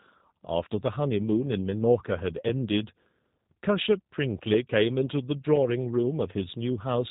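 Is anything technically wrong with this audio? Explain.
Yes. The speech carries G.729 codec damage throughout. The coder rebuilds each 10 ms frame from a vocal tract filter, pitch predictor and few pulses, which fits an 8 kbit/s stream. Nothing passes above 3.8 kHz. Speech sounds rough and plainly synthetic.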